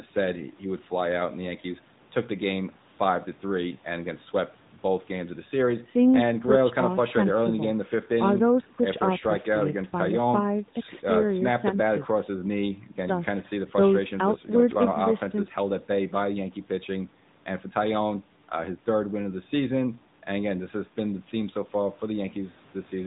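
From start to finish the speech runs through the AMR narrowband mobile codec, and the damage is plainly audible. The signal has been squeezed into an 8 kHz phone channel, so everything above 4 kHz is gone. What's left is rebuilt from a vocal-tract model fed by sparse pulses, which gives the voice that buzzy, synthetic mobile-call colour. The degree of it fits a mid-range AMR-NB mode of around 10 kbps.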